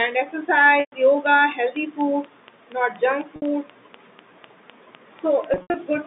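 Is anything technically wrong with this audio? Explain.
Yes, there are two kinds of fault.

Packet loss with pitch repetition happens three times: 0.80 to 0.92 s (120 ms lost), 3.36 to 3.42 s (60 ms), and 5.54 to 5.74 s, where 140 ms goes missing in short gaps spread over 200 ms, the longest run 80 ms. The losses fit packets of 20 ms each. The receiver filled each hole by looping the last pitch cycle and fading it down. The 60 ms gap comes across as a briefly held, buzzy tone. The 120 ms gap and the 80 ms run stretch into a fade before normal sound returns through a quick cross-fade.

A train of clicks runs from 1.26 to 5.94 s: roughly twenty similar pulses at a steady 4.07 per second, peaking at about the level of the signal itself. Repeated pulses of the same shape at an even pace most likely come from electrical interference or a faulty connection or power supply. They sound like a regular ticking laid over the audio, clearly audible through the pauses as well as under the sound, all through the line-band 150 Hz to 3.7 kHz telephone path.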